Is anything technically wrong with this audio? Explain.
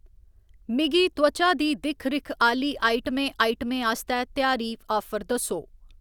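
No, nothing is technically wrong with this audio.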